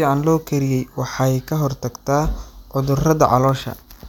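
No faults are audible anywhere in the recording.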